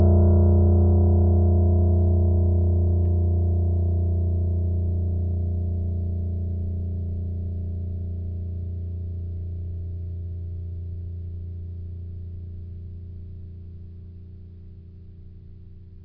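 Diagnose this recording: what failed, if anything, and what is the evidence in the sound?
Nothing failed: no stage of the chain, from wiring and conversion through to storage and playback, leaves any audible evidence on this music recording.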